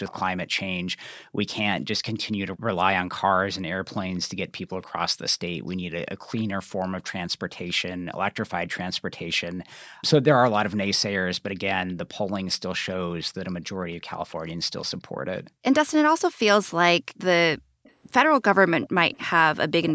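Echo leak, 0.05 to 11.93 s: a faint copy of the speech follows it 292 ms later, roughly 25 dB below it. The likely cause is the far end's loudspeaker reaching its microphone, with the echo canceller passing part of that pickup back down the line.

Background gated by the echo canceller, 0.47 to 9.93 s: while the loudspeaker played, the canceller turned the microphone down hard. The room sound ducks by up to about 40 dB in dips totalling around a second and a half, then returns when the canceller releases.

The same gating recurs from 13.74 to 17.84 s. The background again drops as far as about 40 dB, for roughly a second and a half in all.

The echo leak returns from 17.84 to 19.27 s with the same 292 ms delay. The delayed copy is now somewhat stronger, around 20 dB under the speech.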